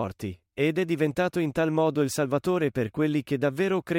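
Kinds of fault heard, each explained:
No faults can be heard in this recording.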